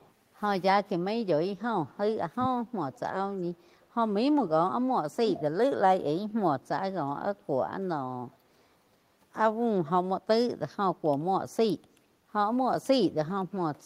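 At 0.00–0.12 s a faint copy of the speech returns about 390 ms late, likely echo leak from a far-end loudspeaker the echo canceller did not fully remove. From 1.51 to 1.96 s the room sound dips by up to about 11 dB: background gated by the echo canceller, which held the microphone down while the loudspeaker played. At 2.37–2.55 s the speech drops sharply, likely suppressed in double talk as the canceller ducked both sides together. Further echo leak follows at 2.92–3.00 s, again delayed about 400 ms. At 5.12–5.16 s a briefer, shallower double-talk dip occurs. The echo leak at 5.28–5.42 s is the loudest, only about 10 dB under the speech, with a delay of 405 ms. A faint echo leak at 8.31–8.38 s arrives 412 ms late.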